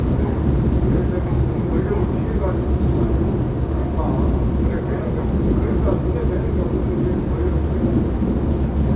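No technical faults turn up anywhere in the clip, so there is nothing to describe in time order.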